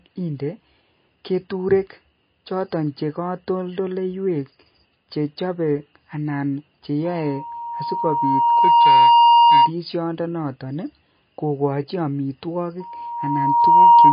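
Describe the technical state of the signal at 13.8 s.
At 13.8 s, a microphone is picking up the loudspeaker it feeds, and at one frequency the loop returns more than it sends. This loudspeaker feedback squeal starts at 12.80 s and runs to the end at 14.13 s. A pure tone at 941 Hz grows over roughly a second and then holds at about 15 dB above the speech. By 13.8 s it is a steady, piercing squeal on top of the sound.

Underneath, the speech has the watery, swirly texture of MP3 compression at a bitrate that likely sits around 24 kbps. The encoder, short of bits, cuts everything above 5 kHz and drops weak frequency lines that switch on and off from frame to frame. The damage is plainly audible here: the sound is dull and smeared, with a burbling shimmer on s sounds.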